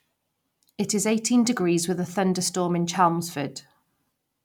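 No technical faults are audible.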